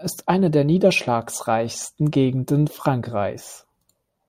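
Nothing in the speech recording stood out as a technical problem on listening.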